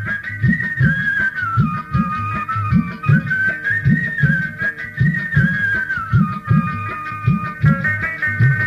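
No technical faults are audible.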